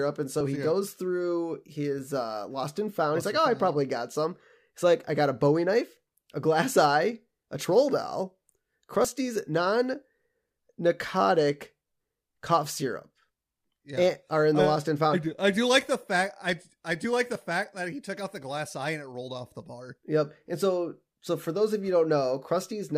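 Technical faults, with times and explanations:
0.41 s, 9.05 s and 17.36 s, dropped buffer (overrun): the recording side likely failed to read its incoming samples before the hardware wrote over them, so short pieces of speech vanish and the audio on either side is butted together with no gap. Each join gives a jump forward. About 10 ms goes just before "he yeah goes through", about 30 ms at 9.05 s, and about 10 ms between "I do like the" and "fact that he took".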